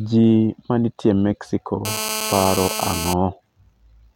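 From 1.85 s to 3.14 s, a GSM phone buzz cuts across the speech. A nearby 2G handset was in a call, sending radio bursts about 217 times a second. The audio circuitry rectified those pulses, turning them into sound. The result is a hard, raspy buzz at roughly 217 Hz, dense with harmonics. It holds steady throughout, as call traffic does. It sits only about 7 dB below the speech, so it is plainly audible.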